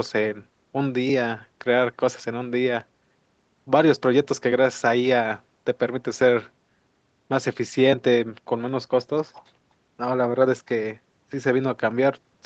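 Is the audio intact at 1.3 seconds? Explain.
Yes, the speech at 1.3 seconds is intact, with nothing there beyond the ordinary band limit of the call path, which leaves nothing above about 8 kHz.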